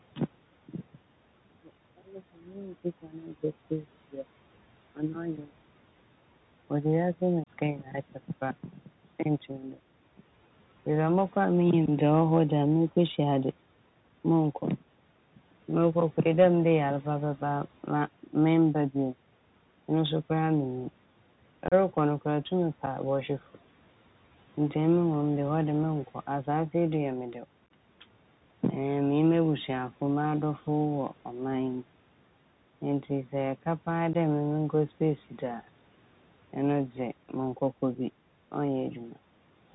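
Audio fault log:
Throughout: Bluetooth CVSD headset codec. The speech arrives over a narrowband headset link, consistent with 64 kbps CVSD, where each sample is reduced to a single up-or-down bit whose step size keeps adapting. Nothing above 4 kHz survives, so the speech sounds boxy. Sharp, loud high-frequency sounds outpace the step size and smear into distortion, sibilants come out scratchy, and a granular quantisation hiss sits beneath the whole signal.
7.44–7.49, 11.86, 21.68–21.74, 22.86, 27.66–27.71, 34.13–34.16: unconcealed Bluetooth headset packet loss. Short voice packets between the headset and the phone were dropped, and nothing was done to cover the gaps, so silence or an idle pattern fills them. The first hole, about 30 ms, comes just after "wiase mu". The one at 21.68 is the longest, at about 34 ms. At 27.66 the loss is broken into several small gaps spread over about 38 ms rather than one clean hole. 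The last, about 15 ms, follows "sɛ ɛka paa". Each gap has abrupt edges, and the signal returns briefly quieter as the CVSD step size rebuilds.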